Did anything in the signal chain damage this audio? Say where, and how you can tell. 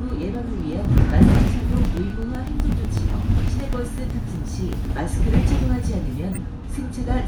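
Yes. At the driver or buffer stage there are periodic USB or driver dropouts from 0.10 to 4.98 s: about forty tiny ticks spaced every 0.125 s, each about 2 ms of lost audio replaced by silence. The waveform shows evenly spaced notches to zero, and the spectrogram shows thin vertical broadband lines.

At the codec stage a corrupt frame was decoded at 6.33 to 6.38 s. Damaged bits in about two frames were played anyway, putting energy at the wrong frequencies and producing a brief chirp-like blip. The spectrogram shows a short, misplaced block of energy.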